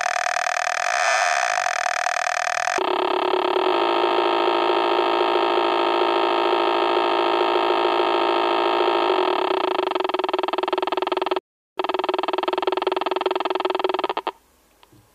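From the start to 2.78 s, a section at the wrong speed runs at 1.92 times its proper rate, so the sound is both hurried and raised by roughly ten semitones. The likely cause is playback or editing against the wrong clock. Tempo and pitch shift together by the same ratio, which separates this from a pitch-shift effect, where pitch moves but timing stays intact. At 2.78 s the rate snaps back to normal.

From 11.39 to 11.78 s, a playback stall cuts the output to silence for about 0.38 s. The likely cause is the player running short of data or its thread being held up. The sound halts mid-flow for a noticeable time before playback recovers.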